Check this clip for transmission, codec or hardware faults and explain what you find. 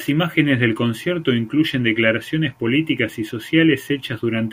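I found no faults to explain in this clip.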